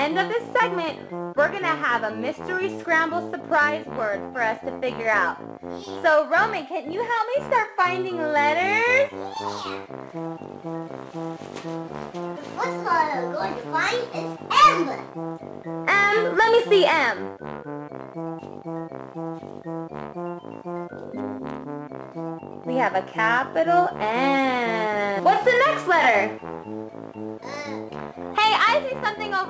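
No technical faults can be heard: the audio has passed through a WebRTC call path working as designed, and its content stops at 8 kHz, which fits the G.722 wideband codec at 64 kbps.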